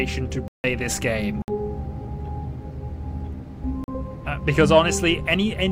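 Three blocks of digital silence, where the output dropped samples to zero, cut the audio abruptly at 0.48–0.64 s, 1.42–1.48 s and 3.84–3.88 s, each leaving a short hole.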